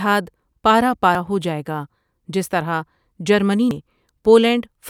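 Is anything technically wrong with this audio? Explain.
Yes. Compressed frames are skipped twice in this speech, at 1.07–1.15 s just before "ہوجائیگا جس طرح جرمنی" and at 3.71–3.80 s right after "ہوجائیگا جس طرح جرمنی". Each time, whole coded frames never reach the output, so the speech leaps forward by about a tenth of a second. On a spectrogram, harmonics break off and resume misaligned at the join.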